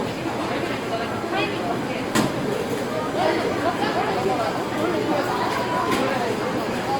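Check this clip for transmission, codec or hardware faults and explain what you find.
Two faults are present: coding damage throughout and one brief dropout near the end.

Across the whole clip the everyday sounds come out grainy and rough, with tonal parts turned noisy, which is likely Opus compression in its music mode at a rate around 24 kbps. It fills starved bands with folded or noise content, so a spectrogram shows content reaching about 20.1 kHz but smeared and speckled rather than gapped.

At 6.1 s a block of digital silence cuts in for 5 ms, where output samples went to zero with no fade. It is heard as a tick or dip. The waveform shows a near-flat stretch with abrupt edges, and the spectrogram shows a thin vertical broadband stripe.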